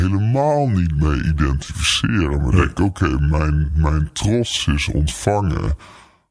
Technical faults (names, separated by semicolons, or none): wrong sample rate